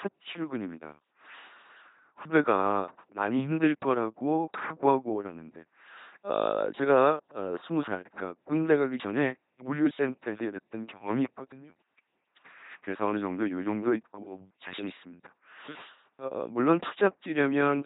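From start to finish the speech runs through an LPC-10 vocoder, with heavy damage that fits a 2.4 kbit/s stream. Each frame is rebuilt from a short all-pole filter fed by either a pulse train or noise, so the result is a buzzing, mechanical robot voice, with stray buzz or hiss where voicing is misjudged. A spectrogram shows nothing above about 3.9 kHz, with rigid, evenly spaced harmonics or flat noise bands switching abruptly from frame to frame.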